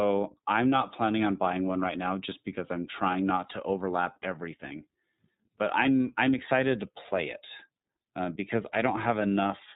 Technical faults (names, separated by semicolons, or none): iLBC codec